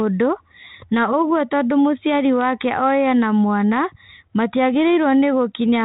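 No technical faults are audible.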